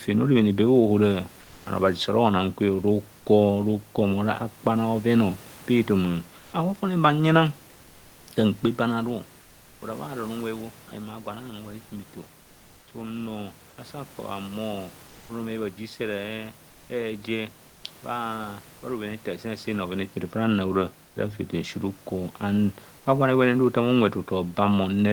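At 1.41, 6.39, 9.41, 13.69, 17.67 and 21.07 s, short pauses of 80 to 400 ms lose the room's real background and carry comfort noise in its place: a smooth, featureless hiss, mostly about 1 to 3 dB quieter, and slightly louder at 6.39 s. The likely cause is discontinuous transmission, with the Opus encoder going quiet in pauses and the receiver synthesising filler. Unlike a dropout, the gap never falls silent. The noise just loses its texture.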